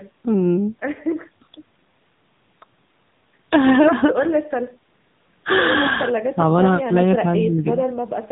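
Throughout, an AMR narrowband mobile codec cuts everything above 4 kHz and renders the speech buzzy and synthetic, pointing to roughly 8 kbps; plain band-limiting would dull without this artificial timbre.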